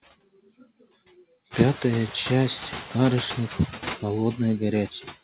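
Noise suppressor artifacts run throughout. Bands judged to be steady noise are pulled down by about 15 dB frame by frame, so the background dips in pauses and swells under the voice. The room noise rises near 1.5 s.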